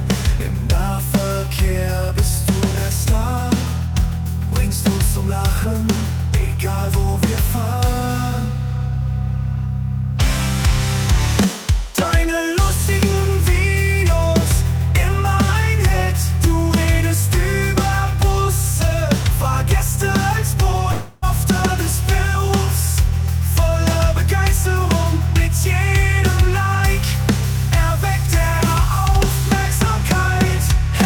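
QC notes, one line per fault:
20.91–21.24 s, long network dropout: audio likely stopped arriving, so the receiver stretches the last sound into a fading buzz for 0.31 s, and 0.3 s is lost.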